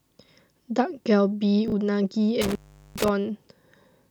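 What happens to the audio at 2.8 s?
An intermittent contact, a loose cable or plug, opens between 2.42 and 3.09 s, dropping the speech for about 0.40 s into faint hiss with crackle at the edges.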